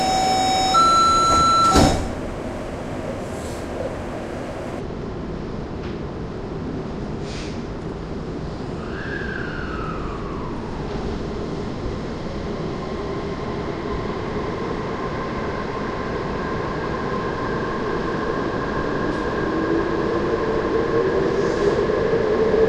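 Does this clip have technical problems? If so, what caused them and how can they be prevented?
Yes. From 4.79 s to the end, the sound turns slow and deep, a section at the wrong speed running at 0.638 times normal and about seven semitones low, likely from playback against the wrong clock. To prevent it, match the playback or editing sample rate to the recording's rate before export.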